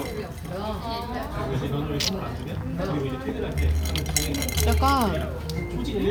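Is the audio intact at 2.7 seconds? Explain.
No. At 2.7 s the sound carries computer activity noise, which runs through the whole clip rather than starting or stopping near that point. Shifting processor, graphics or mouse load disturbs the ground the audio circuit shares with the computer, injecting a buzzy, chirping pulse train at roughly 150 Hz. It sits around 30 dB below the wanted signal and tracks the machine's activity rather than the sounds being recorded.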